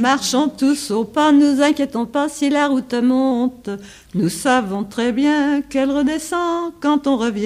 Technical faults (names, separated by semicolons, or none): drift correction step